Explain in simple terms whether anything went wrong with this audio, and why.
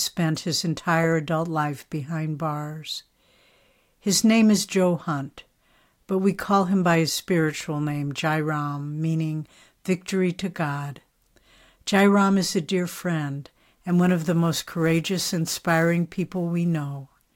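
From 13.89 s to the end, sample clock jitter adds a hiss that swells on loud, bright speech and vanishes in pauses, unlike steady background noise.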